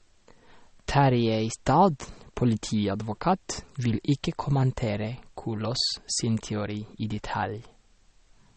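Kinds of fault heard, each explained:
MP3 compression: throughout the speech, nothing is heard above 8.4 kHz and the damage is plainly audible. This is likely an MP3 encoder short of bits, fitting about 32 kbps, cutting treble at a fixed point and dropping weak lines frame by frame.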